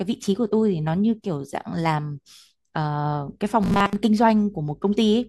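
From 3.63 to 3.97 s the speech turns into a rigid metallic buzz at 200 Hz, robotic sound from repeated short buffers, likely from a 5 ms chunk looping over most of the stretch. It shows as identical repeating waveform cycles and evenly spaced 200 Hz harmonic lines on a spectrogram.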